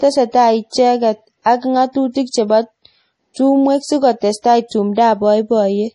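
A starved lossy encoder, likely MP3 compression at a low bitrate that fits roughly 32 kbps, shapes the speech from start to finish. Short of bits, it cuts the treble so that nothing remains above 11 kHz, and it drops weak frequency lines that then flicker in and out from frame to frame. The damage is heavy: the speech sounds dull and watery with a swirling texture, s sounds turn into metallic chirps, and consonant onsets smear.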